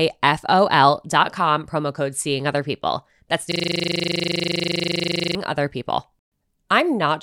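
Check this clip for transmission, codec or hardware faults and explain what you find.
One fault is present, a system hang loop. From 3.52 to 5.35 s the speech locks into a rapid, rough 25 Hz buzz-stutter, one 40 ms fragment repeating about 46 times. The system froze while the audio hardware kept replaying the same 40 ms ring buffer.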